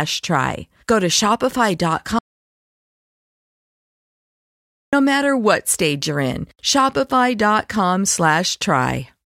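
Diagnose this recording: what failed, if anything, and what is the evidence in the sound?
An audio dropout to silence cuts the speech at 2.19 s, and it resumes at 4.93 s on "matter what stage", losing 2.74 s. The gap is silent with no room tone, unlike a gate's residual floor. The input connection was likely lost while recording continued.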